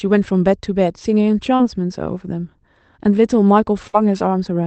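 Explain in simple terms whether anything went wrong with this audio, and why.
Yes, two brief dropouts occurred, both typical of a speech call sent over the internet.

At 1.55 to 1.61 s there is a short concealed packet loss. About 40 ms of the call arrived too late to be played. The receiver covered the gap by extending the last bit of sound, following its pitch or filling in with matching noise, then blended back into the real signal. The result is a quick smear or wobble, and a short consonant in that spot can be lost.

At 3.87 to 3.95 s there is a burst of packet loss, a longer gap of about 60 ms lost in one go. The receiver again carried the previous sound forward while fading it down. A voiced sound turns into a brief held buzz, and anything else into a fading hiss. The speech then picks up slightly further along, and the part that fell in the gap is simply missing.

The call's codec also leaves its mark. 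It keeps the sound to roughly 8 kHz and below, so the very top end is absent throughout.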